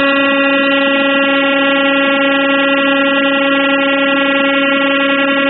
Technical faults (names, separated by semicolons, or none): AAC compression